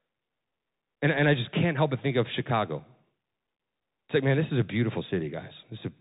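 From start to finish the speech runs through a Bluetooth CVSD headset codec, the kind that fits a 64 kbps link. Nothing gets past about 3.8 kHz, so it sounds boxed-in. The one-bit slope tracking plainly falls behind on loud, bright bits, leaving scratchy s sounds and a grainy hiss underneath.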